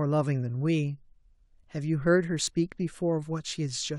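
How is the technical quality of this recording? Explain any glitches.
The speech has one glitch. At 2.47 s there is an overlap between stream segments: two segments' timestamps overlapped, and the player trimmed the overlap from sound that wasn't actually duplicated. About 14 ms goes missing, so the waveform jumps and a tiny skip is audible.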